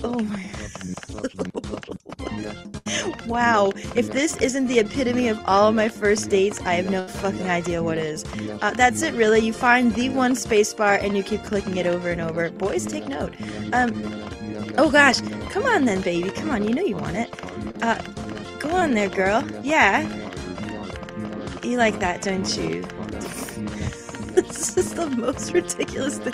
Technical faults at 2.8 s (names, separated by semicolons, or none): burst of packet loss